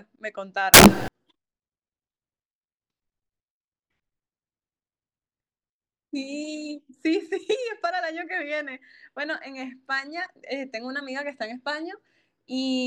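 Samples built from the wrong bytes, 0.74 to 1.08 s: bytes are misassembled, so rapidly changing low bits dominate each value, producing a burst of loud, harsh broadband noise over the speech.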